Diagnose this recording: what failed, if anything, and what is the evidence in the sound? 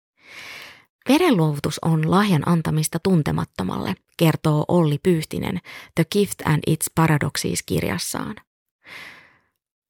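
Nothing stood out on listening: the speech came through without anything that points to a failure at any stage of the chain.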